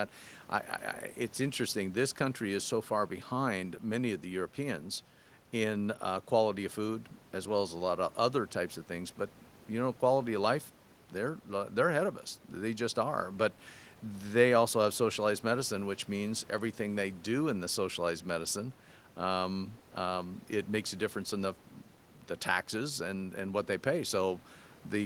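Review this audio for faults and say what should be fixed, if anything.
No faults; nothing needs fixing.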